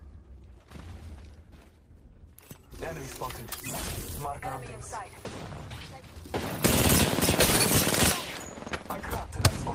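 At 4.43 s there is a skip ahead. Roughly 0.4 s of audio is gone, with nothing filling the hole. Later audio was already queued, so playback lurches forward. The two sides butt together almost directly, giving an abrupt jump.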